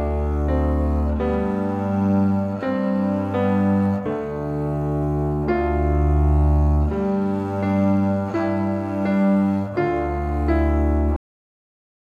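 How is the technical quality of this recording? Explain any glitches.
The recording has one glitch, a cut-off end. At 11.16 s the audio stops mid-sound and drops straight to digital silence for the final 0.89 s. The last buffers were never written, so unlike a fade-out or natural ending, the sound has no decay whatsoever.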